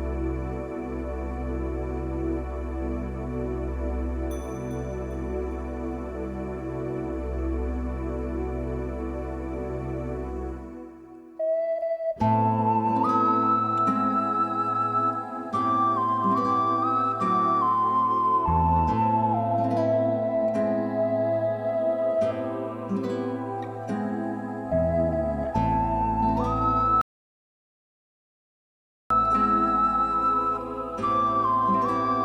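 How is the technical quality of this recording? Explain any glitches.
There is one glitch, a rebuffering stall. From 27.01 to 29.11 s the audio drops to silence for about 2.09 s. The player ran out of downloaded data and waited. It then resumes exactly where it stopped, with nothing missing.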